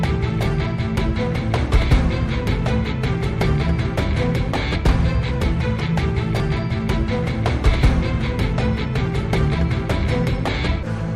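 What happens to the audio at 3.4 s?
Nothing goes wrong at 3.4 s: the audio runs straight through that moment without any dropout, click, glitch or other audible fault.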